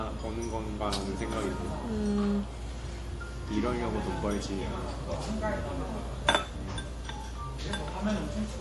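An MP3 encoder starved of bits is the likely cause, consistent with a rate near 48 kbps. Throughout, MP3 compression removes everything above 11.5 kHz and leaves weak spectral lines flickering between frames, so the sound turns plainly watery and swirly, with smeared attacks.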